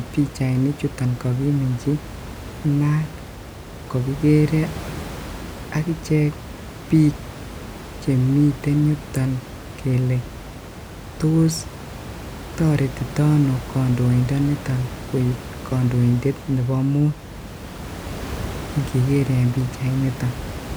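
No technical faults are audible.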